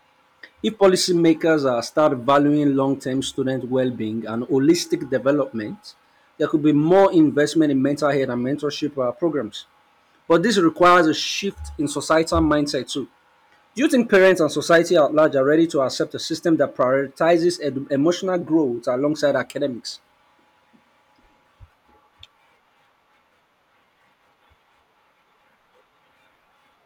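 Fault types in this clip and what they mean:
Hard clipping: the speech is driven about 8 dB past what the signal path can hold, so the loudest peaks are sliced flat, though only a small fraction of samples, well under one percent, actually hit the ceiling. It is heard as brief crackle and grit on the strongest syllables throughout. On the waveform those peaks show squared-off plateaus, and the spectrogram shows vertical smears of high-frequency energy where each flattened peak occurs.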